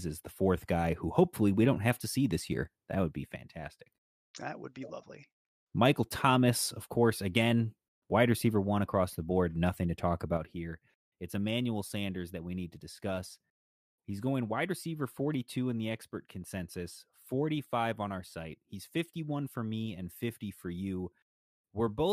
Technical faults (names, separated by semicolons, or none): one channel drops out